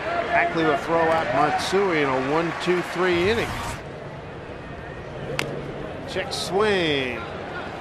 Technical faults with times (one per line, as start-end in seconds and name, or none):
1.18 block of digital silence